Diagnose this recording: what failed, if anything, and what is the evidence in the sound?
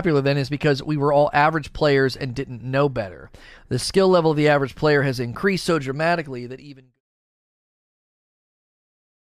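Nothing stood out on listening to this speech clip; the smooth fade-out that begins around 6 seconds and reaches silence at 7.01 s is an ordinary edit, not a failure.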